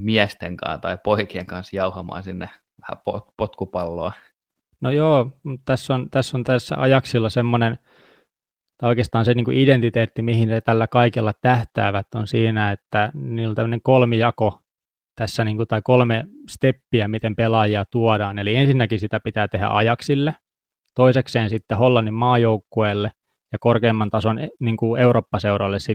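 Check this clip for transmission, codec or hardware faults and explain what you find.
No faults turn up in this clip.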